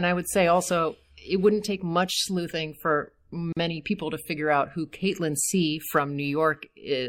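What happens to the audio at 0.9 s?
At 0.9 s the speech is passing through the MP3 compression damage that runs through the whole clip, most likely from an MP3 encode at a low bitrate, around 64 kbps. Short of bits, the encoder drops weaker frequency lines, which flicker in and out from frame to frame. That leaves the speech plainly watery and swirly, with metallic chirps on s sounds and smeared attacks.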